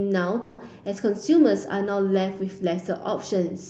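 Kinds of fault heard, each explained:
Call audio freeze: from 0.41 to 0.67 s the sound stalls into a fading buzz that stretches the last moment by 170 ms. It then resumes where it stopped, with nothing lost but running 170 ms later. Likely cause: delayed packets emptied the jitter buffer.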